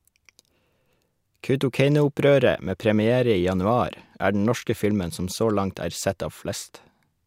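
A speech recording, and nothing in it is technically wrong.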